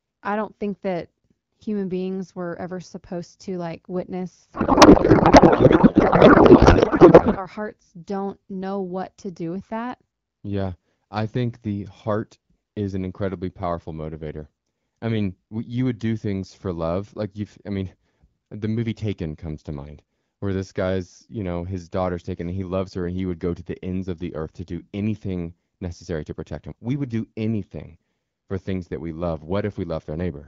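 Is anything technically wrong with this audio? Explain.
Yes. From 4.53 to 7.37 s there is a codec payload misread: the speech turns into garbled noise and warble that barely tracks it. This fits octet-aligned AMR-WB frames being parsed as bandwidth-efficient, so the decoder reads every field from shifted bit positions.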